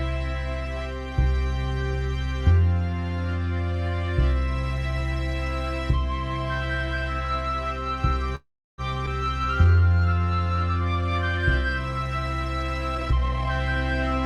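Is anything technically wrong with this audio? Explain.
Yes, there are four delivery faults, all in the second half of the clip.

From 8.35 to 8.81 s there is a call audio freeze. The likely cause is packets held up in transit, so the jitter buffer ran dry and the receiver stretched the last sound to fill the wait. You hear the sound carry on briefly as a decaying buzz or hiss, then about 330 ms of silence, 426 ms of inserted fill in all. When audio resumes it picks up exactly where it left off, so nothing is lost, but a gap has been pushed into the timeline.

At 9.06 to 9.10 s playback skips ahead. A stretch of audio never reached playout, either dropped on the way or discarded by the jitter buffer while later material was already queued. Roughly 150 ms of sound vanishes, with only a 6 ms join bridging the two sides. The result is an abrupt, nearly seamless jump forward, with the material before and after butted together.

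From 9.44 to 10.44 s a jitter buffer slow-down follows. The buffer, running low, rebuilt its reserve by repeating single pitch periods and bits of pauses over and over, adding 163 ms. The audio plays at about 85% speed with unchanged pitch, so sounds are drawn out, and a faint warble can come from the repeated cycles.

From 12.95 to 13.50 s there is a jitter buffer speed-up. Here the buffer held more audio than its target, and the receiver trimmed short pieces of one or a few pitch periods in rapid succession, removing about 0.3 s. Playback runs at about 156% speed with the pitch held steady, which sounds rushed and compressed over that half-second.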